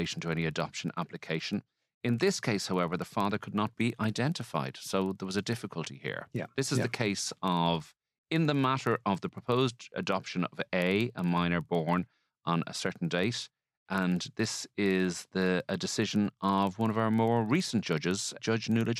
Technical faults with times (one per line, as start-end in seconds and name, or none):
0.00-19.00 filter restarted on every block